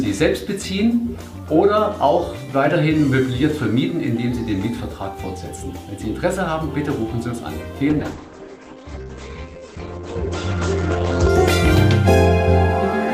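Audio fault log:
7.91–11.35 s, call bitrate drop: the call's bandwidth estimate collapsed and the encoder was forced onto a starved budget. The sound fits a fall from 128 kbps to about 10 kbps, held at that floor for 3.38 s. At so few bits the coding turns coarse, leaving a rough, watery texture. The audio band also narrows from 20 kHz to 8 kHz, so the top end disappears and the sound goes muffled until the rate recovers.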